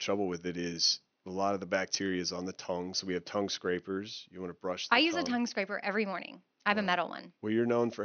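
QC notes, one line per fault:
No faults found; room noise sits far below the speech.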